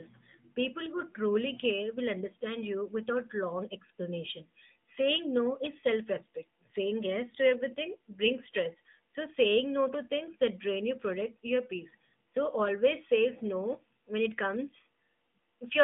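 A speech recording that's been squeezed through the AMR narrowband mobile codec for its whole length, so it sounds like a phone call. The band is boxed into roughly 150 Hz to 3.6 kHz, with nothing above 3.8 kHz at all, and the coding damage is plainly audible: a buzzy, synthetic edge from the vocal-tract model rebuilding the voice from sparse pulses, which fits an AMR-NB mode around 10.2 kbps.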